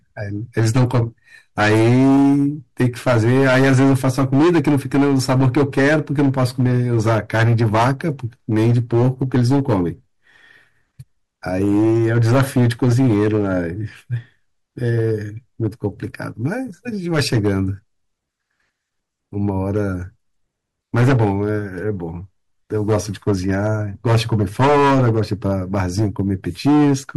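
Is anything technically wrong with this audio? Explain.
Yes. Hard clipping runs through the whole speech clip. The signal is driven roughly 16 dB past what the stage can pass, so around a tenth of all samples hit the ceiling and are sliced flat. Those squared-off tops add strong harmonics high in the spectrum, giving a harsh, buzzing fuzz on every loud syllable rather than occasional crackle. On a waveform the peaks form flat plateaus at both rails. A spectrogram shows broadband smearing up into the high kHz range wherever the level rises.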